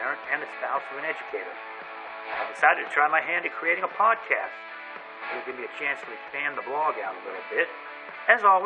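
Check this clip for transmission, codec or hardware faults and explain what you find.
No transmission, codec or hardware faults turn up anywhere in this clip.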